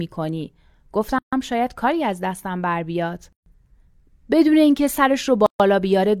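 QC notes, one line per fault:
1.19–1.33 s, 3.33–3.46 s, 5.46–5.60 s: gap at a join of encoded pieces. Silences of 140, 136 and 136 ms recur every 2.0 s in continuous speech. Separately encoded segments were joined untrimmed, leaving encoder start delay and final-frame padding. Edges are smeared by the codec, and the speech resumes where it stopped.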